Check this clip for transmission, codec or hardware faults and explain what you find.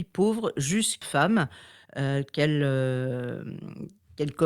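Two transmission faults are audible in this speech clip.

At 1.01 to 1.03 s there is a skip ahead. Roughly 0.7 s of speech was dropped, and both sides join with no gap.

From 1.85 to 3.06 s there is a jitter buffer speed-up. Tiny pitch-period slices are cut, about 150 ms in total. Speech runs 110% fast, same pitch, hurried.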